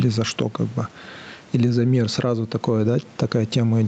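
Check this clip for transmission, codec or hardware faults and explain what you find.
There's one real fault here, gain pumping, and it runs through the whole clip. The gain swings by about 10 dB. The likely cause is gain set far too high with a fast limiter clamping every peak, so everything sounds squashed.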